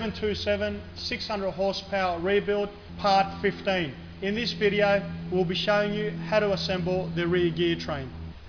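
No technical faults can be heard anywhere in this audio.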